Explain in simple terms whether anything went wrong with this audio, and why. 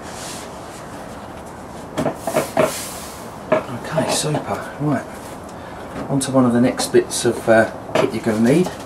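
Nothing stood out as wrong when listening to this audio.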